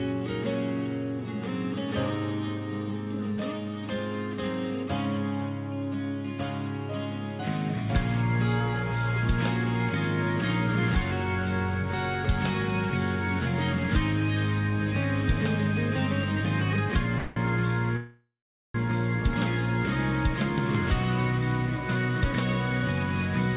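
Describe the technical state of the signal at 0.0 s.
At 0.0 s the signal is intact, with no fault present; it carries the telephone-band sound of a call path, with nothing above about 4 kHz, which fits a G.711 A-law codec at 64 kbps.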